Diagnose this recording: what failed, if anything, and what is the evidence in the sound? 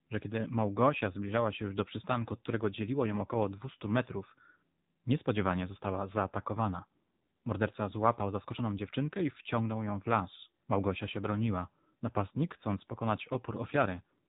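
The failure is at the codec stage: the speech has passed through an AMR narrowband mobile codec, the AMR-NB coder of 2G and 3G calls. Throughout the clip nothing reaches above about 3.8 kHz, leaving a muffled telephone band. The plainly audible buzzy, synthetic texture points to a low rate near 7.4 kbps, too few bits for the coder's vocal-tract model and sparse pulse excitation to describe the speech closely.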